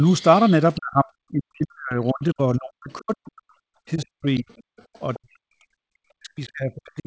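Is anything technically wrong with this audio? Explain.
Yes, there are two faults. Faint scraps of the other side's voice leaking through, about 25 dB below the speech (closer to 35 dB down at 4.38 to 4.63 s), appear at 0.05 to 0.26 s, 0.48 to 0.53 s, 0.74 to 0.80 s, 4.38 to 4.63 s and 5.14 to 5.18 s. This is likely loudspeaker echo the canceller failed to remove.

The speech is suppressed in double talk, dipping by up to about 40 dB at 0.77 to 3.55 s, 3.95 to 4.49 s and from 5.16 s to the end. While both sides talked at once, the echo canceller likely turned the talker down along with the echo.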